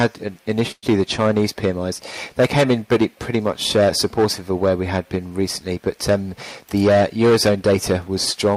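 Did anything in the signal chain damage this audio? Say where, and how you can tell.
Yes, and the damage sits in the network and receive-buffer stages. At 0.71 s the sound stops advancing and the last fragment is drawn out as a decaying buzz until 0.85 s, with its final 40 ms falling to silence. Playback then resumes where it left off, so nothing is lost but a 112 ms gap is inserted and the delay grows by that amount. This is a call audio freeze, likely caused by delayed packets draining the jitter buffer.

From 6.61 to 8.09 s the sound plays at about 107% of its normal rate while the pitch holds steady, which gives that passage a slightly hurried feel. This is a jitter buffer speed-up. The receiver is trimming the backlog by repeatedly removing short segments one or a few pitch periods long. In total it removes about a tenth of a second of audio to pull latency back toward its target.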